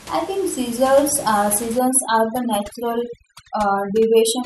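Speech, with room noise sitting about 18 dB below the voice up to 1.79 s. From there, just after "I think seasons uh", overdone noise removal takes hold and runs to the end at 4.46 s. The reduction is set too aggressively, so frequency bands near its noise estimate are pulled down or gated entirely, taking quieter voice components with them. The background drops and breaks up into twinkling specks.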